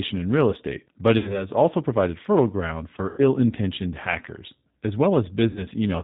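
Throughout, the speech passes through the G.729 codec at 8 kbit/s. Nothing above 4 kHz survives, and the pulse-based reconstruction leaves a plainly rough, synthetic texture.

At 1.18 to 1.47 s, after "in real estate but", there is VoIP packet loss concealed by the speech codec. About 60 ms is missing, which fits two lost packets. The decoder extends its last pitch and filter into a fading buzzy tone or coloured noise, and the voice stays weak or distorted for a moment after the packets return, into "also provided fertile ground". The same happens at 3.09 to 3.22 s before "intentioned hackers", with about 90 ms lost, and at 5.50 to 5.65 s, with 60 ms lost.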